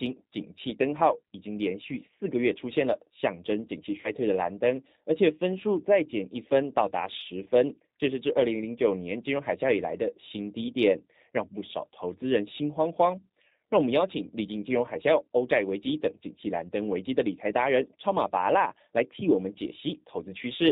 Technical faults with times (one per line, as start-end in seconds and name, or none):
0.00-20.72 G.729 codec
4.01-4.11 VoIP packet loss concealed by the speech codec
7.44-7.48 VoIP packet loss concealed by the speech codec